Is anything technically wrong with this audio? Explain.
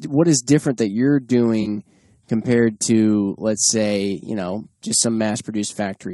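Yes, two faults. Throughout, the speech has plainly audible damage from likely low-delay AAC compression. Its short frames resolve harmonics poorly, so at what sounds like around 32 kbps the speech turns rough and grainy.

From 1.61 to 1.67 s, between "is different that you're" and "compared to let's say", there is AAC frame loss with concealment. About 40 ms of data went missing, which fits two lost frames. The decoder patched the gap from the last good spectrum, leaving a brief smeared, noisy patch.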